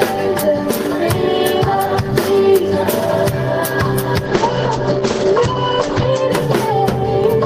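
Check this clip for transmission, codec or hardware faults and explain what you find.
Two faults are present: a bitrate drop in the middle of the clip and a pair of pops near the end.

From 4.26 to 6.35 s there is a call bitrate drop. The encoder rate falls from 32 to 11 kbps, bottoming out for 1.82 s, and the bandwidth narrows from 20 kHz to 8 kHz. The sound turns muffled and coarse.

From 7.01 to 7.27 s there is a loud pop, heard as two sharp clicks about 5 dB above the sound, likely from a switch, plug or static discharge.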